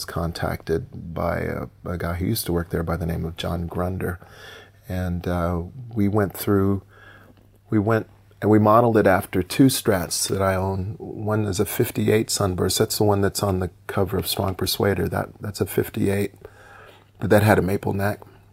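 No technical faults are audible anywhere in the clip.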